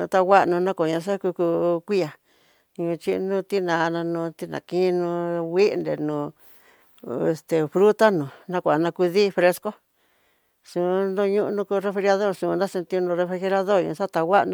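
No dropouts, distortion, noise bursts or timing faults are audible anywhere in the recording.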